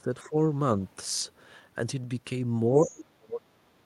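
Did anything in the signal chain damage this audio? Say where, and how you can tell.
Yes, in call processing: speech suppressed in double talk. The speech dips by around 15 dB from 0.0 to 0.36 s, then from 2.83 s to the end it gets pulled down much harder, around 30 dB. Likely an echo canceller turning down this side's speech along with the echo while both ends talked at once.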